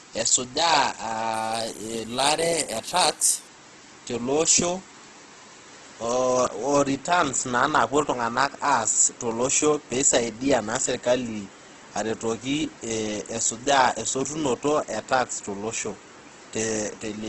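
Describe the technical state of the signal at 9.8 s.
At 9.8 s the speech sits inside damage that runs through the whole clip, most likely Opus compression in its CELT music mode at a low rate, which fits roughly 12 kbps. Short of bits, the encoder fills upper bands with folded copies of lower ones or with noise, so the speech sounds rough and grainy. On a spectrogram, energy stops flat at 12.1 kHz, with smeared, speckled texture below that ceiling instead of clean harmonics.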